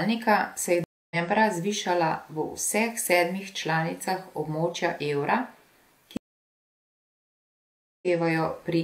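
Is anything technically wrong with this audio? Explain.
Yes. This speech clip has two stream reconnects. At 0.84 s the audio goes silent for about 0.27 s, and at 6.17 s for about 1.85 s. Each time the connection dropped, the player reconnected and started a fresh decoder mid-stream. The speech resumes further along rather than where it stopped, roughly 0.3 s later after the first gap and about half a second later after the second, so material is skipped.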